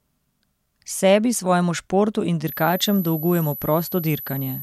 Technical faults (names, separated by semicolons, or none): switching supply whistle